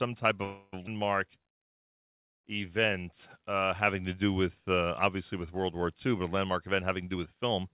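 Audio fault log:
0.44–0.74 s, call audio freeze: The sound stops advancing for about 0.28 s. Instead of silence, the last moment before the stall is stretched into a fading buzz that stays within the narrow band below 4 kHz that this G.711 call path carries. The likely cause is packets held up in transit, which let the jitter buffer run dry so the receiver had to improvise a fill. When the audio resumes it continues exactly where it left off, so nothing is lost, but the delay grows by roughly 0.28 s.
0.86–0.89 s, skip ahead: Playback lurches forward across a join of only a few milliseconds. About a fifth of a second of speech is gone, and the sound on either side is butted almost directly together. Audio was dropped while later packets were already queued, either lost on the way or discarded by an overfull jitter buffer. That cuts back the extra delay built up by the freeze just before.
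1.39–3.52 s, jitter buffer slow-down: For just over two seconds the speech runs at about 92% of its normal rate with no change in pitch. Vowels and pauses sound drawn out. The receiver was rebuilding its reserve by repeating single pitch periods and bits of pause many times in a row, adding roughly 0.17 s of material in total.
6.45–7.74 s, jitter buffer speed-up: The final stretch runs about 9% fast at unchanged pitch, giving a slightly hurried delivery to the end. The buffer was holding more audio than its target, so the receiver trimmed short slices of one or a few pitch periods again and again. That removed on the order of 0.15 s and pulled the latency back down.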